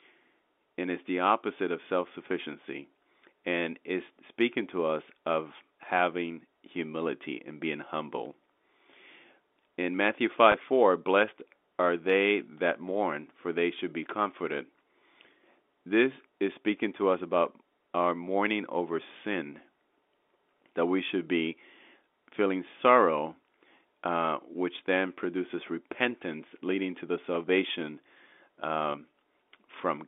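Telephone speech, its energy confined to about 250 Hz to 3.6 kHz, shows packet loss with pitch repetition at 10.52–10.54 s and 28.92–28.94 s. Each roughly 20 ms gap, which fits a single lost packet, is bridged by a repeated pitch period that sounds briefly held and buzzy. The waveform shows identical cycles there, and the spectrogram shows frozen, perfectly flat harmonics.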